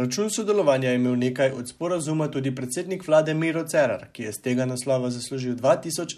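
No technical faults are audible.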